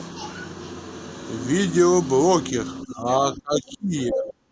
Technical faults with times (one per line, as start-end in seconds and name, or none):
2.83-3.06 speech suppressed in double talk
3.35-4.52 speech suppressed in double talk
4.25-4.33 other side's voice leaking through